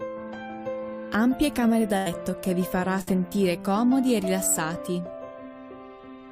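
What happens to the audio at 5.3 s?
Nothing goes wrong at 5.3 s; the audio plays through that moment intact, with no fault to be heard.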